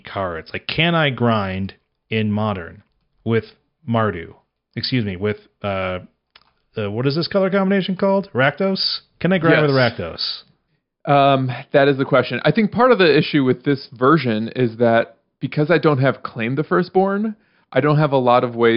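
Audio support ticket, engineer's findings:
No fault found in the speech clip. No component flagged; closing with no action.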